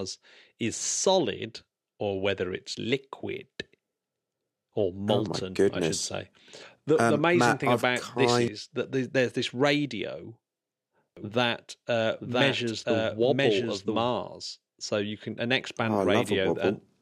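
A doubled audio track runs from 11.17 to 14.09 s in this speech recording: a second, full-band copy of the speech sits roughly a second behind the original at about the same loudness, so every phrase is heard twice. The copy has no reverberant tail or room colouring and switches in and out abruptly at those times, which points to the signal likely being captured again by a slower path or duplicated out of step in an edit.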